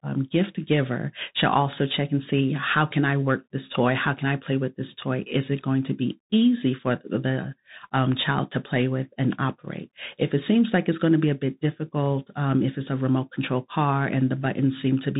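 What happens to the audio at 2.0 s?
At 2.0 s the speech is in the middle of a Bluetooth CVSD headset codec fault that runs through the whole clip. Each sample is a single up-or-down bit, fitting a 64 kbps link. The step size adapts. Nothing above 3.8 kHz survives. Loud highs outrun the step and distort, s sounds turn scratchy, and a granular hiss sits underneath.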